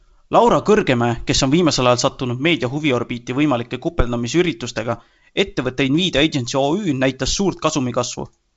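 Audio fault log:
Nothing stood out on listening to this speech, which carries the wideband telephone bandwidth of G.722 coding at 64 kbit/s with no content above about 7.7 kHz.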